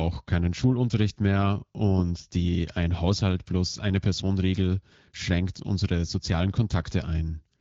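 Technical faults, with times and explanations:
No technical faults; the speech carries the light coding texture of AMR wideband (HD Voice) at 12.65 kbit/s, with the band above 6.4 kHz filled by shaped noise.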